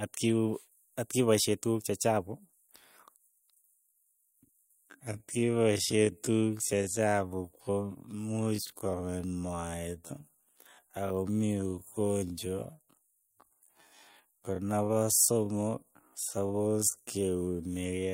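Speech whose pace abruptly halves at 3.63 s and stays that way to the end, with the pitch unchanged. That unchanged pitch marks it as a time-stretched section, not a slowed playback or sample-rate mismatch, which would drag the pitch down with the tempo. The slowed stretch drags, likely because software lengthened it to fit a duration by repeating short pieces of the sound.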